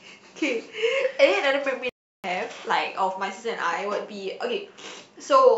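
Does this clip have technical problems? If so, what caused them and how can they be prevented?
Yes. There is a playback stall from 1.89 to 2.24 s. The speech cuts off abruptly mid-flow for about 345 ms and then resumes. The likely cause is the player running out of buffered data or its thread being blocked. Unlike a natural pause, the sound breaks off without tailing away. A larger playback buffer and a player thread that never waits on other work would prevent it.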